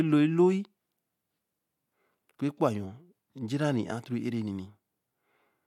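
No technical faults are audible anywhere in the recording.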